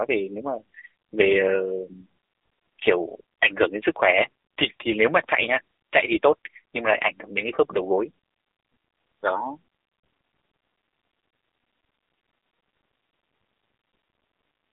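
Right from the start, the speech runs through an AMR narrowband mobile codec: nothing above 3.8 kHz, thin lows, and a buzzy, synthetic edge that points to a low bitrate around 7.4 kbps.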